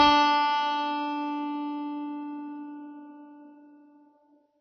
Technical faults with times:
0.00-4.61 AAC compression

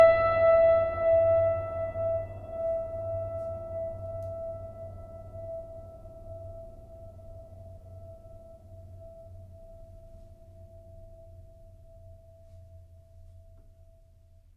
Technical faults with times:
none

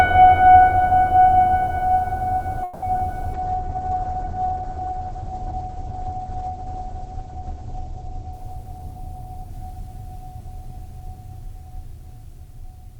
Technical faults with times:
2.63-2.84 call audio freeze
2.98-3.01 short concealed packet loss
3.34-11.21 call bitrate drop
8.57-11.31 jitter buffer speed-up

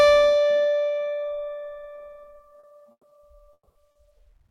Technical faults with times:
1.95-1.99 short concealed packet loss
2.59-2.65 short concealed packet loss
2.91-3.05 burst of packet loss
3.09-3.13 short concealed packet loss
3.53-3.77 burst of packet loss
3.91-3.97 short concealed packet loss

